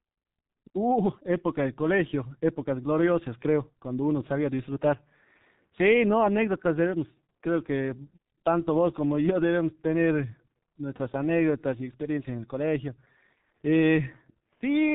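From start to end, the speech carries heavy G.723.1 codec damage. Nothing above 3.8 kHz survives, so it sounds muffled. The slow-updating voice model smears consonants and adds hoarseness, which fits a low-rate coding near 6 kbit/s.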